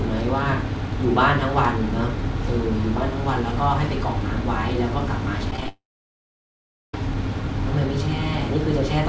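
From 5.51 to 5.68 s the speech turns choppy, with small pieces missing. This is repeated packet loss: five short gaps, the longest about 11 ms, each patched by stretching the preceding sound, so about a quarter of that span is synthetic fill.

Right after, at 5.68 s, the sound smears into a brief fading buzz, then drops to silence for about 1.1 s before speech returns at 6.94 s with that stretch simply gone. The likely cause is a long network dropout, with concealment giving out after a short while. The G.722 call path limits everything to below 8 kHz.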